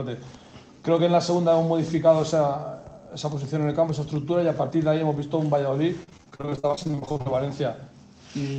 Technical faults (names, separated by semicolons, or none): repeated packet loss (robotic sound)